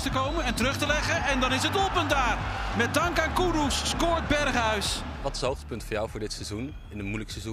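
Listening closely to the audio, nothing stood out as a technical fault at any point.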